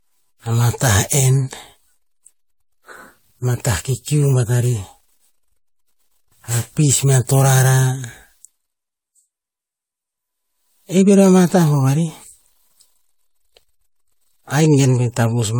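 Throughout the speech, generation loss is audible: a swirling, hollow smear with softened consonant attacks, more degraded than one pass at a moderate AAC-LC rate near 96 kbit/s would sound. It is likely the result of around seven successive re-encodes, each adding fresh quantisation noise and spectral holes.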